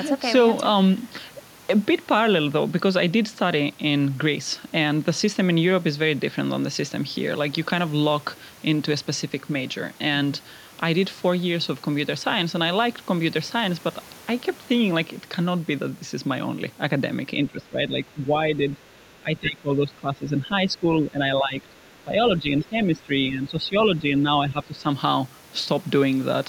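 From 17.45 to 24.88 s the speech sinks by up to about 15 dB: speech suppressed in double talk, likely an echo canceller ducking overlapping talk.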